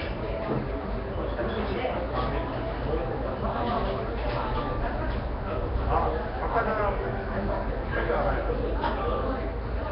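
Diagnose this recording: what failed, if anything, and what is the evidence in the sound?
Codec stage: rough, hissy, smeared underwater quality throughout, nothing above 5.3 kHz, likely Nellymoser compression starving weak bands of bits and filling them with noise.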